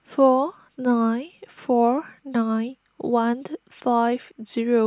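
No technical faults can be heard anywhere in the speech recording.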